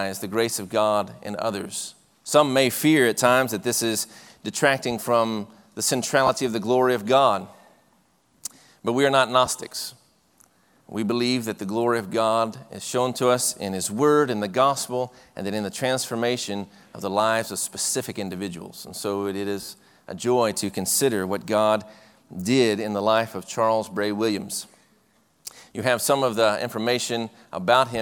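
Lost LE Audio frames break up the audio at 6.27–6.29 s, 9.46 s and 19.61–19.69 s. In each gap the LC3 decoder fills in by replaying the last good spectrum with scrambled signs, so tonal content briefly turns into a noisy smear. The first two gaps sound like about 20 ms and 10 ms, one or two 10 ms frames. The third spreads over about 80 ms, with the longest stretch near 40 ms.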